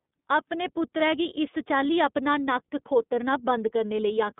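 From start to end, the speech carries iLBC codec damage. The band is limited to 150 Hz to 3.7 kHz, with nothing above 3.8 kHz. Each 30 ms frame is coded independently, which fits the 13.33 kbps mode. Unlike plain band-limiting, the voice also sounds plainly rough and synthetic.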